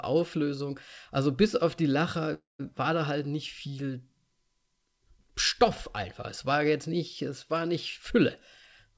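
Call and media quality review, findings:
Call audio freeze, 2.34–2.61 s. Sound stalls into a brief fading continuation, then about 170 ms of silence. Likely jitter buffer underrun from delayed packets. Playback resumes where it stopped with nothing lost, but the gap adds about 250 ms of delay.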